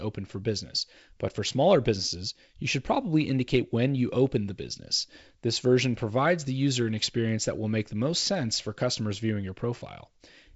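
No faults detected in this speech; it comes through G.722 wideband coding at 56 kbit/s, with nothing above about 7.7 kHz and the light coding noise expected at that rate.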